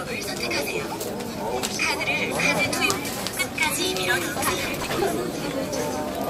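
From 4.65 to 5.04 s there is processor overload crackle. The processor keeps missing its deadlines for small buffers, around 5 ms each. Dozens are skipped outright. Each skip leaves a hard-edged gap. Together they form a gritty tearing burst over the sound.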